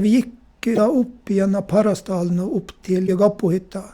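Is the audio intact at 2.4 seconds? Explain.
Yes, the speech at 2.4 seconds plays through cleanly, with no dropout, click, distortion or other fault at that moment.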